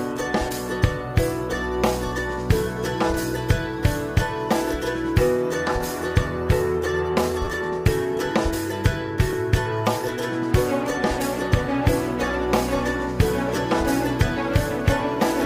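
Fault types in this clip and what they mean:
Repeated buffer: when fresh audio failed to arrive in time, the player sent out the previous block again, so a tiny slice of sound plays more than once with a hard seam at each repeat. The slices are so short, fitting a 10 ms buffer, that each event comes across as a brief click or buzz rather than an audible stutter: a double repeat from 7.45 to 7.47 s, then single repeats at 9.33 s and 13.56 s. Unlike a dropout, nothing goes silent and no audio seems to be lost; the same material is heard more than once.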